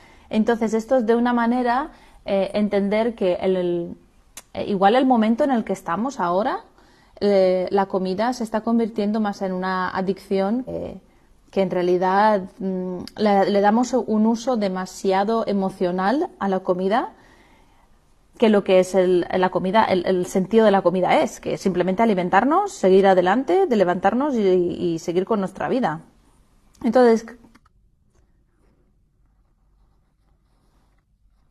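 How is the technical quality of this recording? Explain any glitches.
There's one glitch, at about 10.65 to 10.70 s: a short burst of damaged data in the compressed stream. The decoder hits corrupted frames, misreads them and loses sync while it hunts for the next valid header, so you get a quick chirp, click or short hole about 50 ms long.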